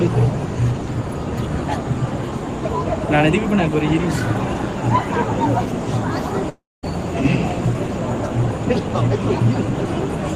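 From 6.49 to 6.85 s, a likely long network dropout: sound smears into a fading buzz, then a flat waveform and blank spectrogram for 0.22 s.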